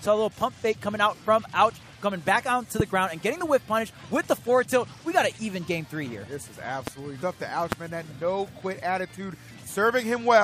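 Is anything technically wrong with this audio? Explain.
Yes, there are two kinds of fault. Loud pops occur at 2.80–2.82 s, 6.87–6.90 s and 7.72–7.75 s. Each is a single sharp pop riding about 15 dB above the sound (about 20 dB for the last). The likely cause is a sudden voltage pulse, such as a switch, static or a driver glitch, added to the signal while the sound continues underneath.

Damaged data in a compressed stream appears at 7.21 s. Corrupted bytes there make the decoder misread the frame and lose sync until it finds the next frame header. The result is a brief chirp or blip.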